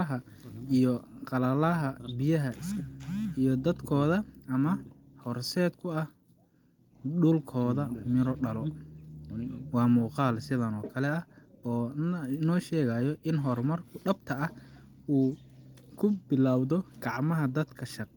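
No technical faults are audible.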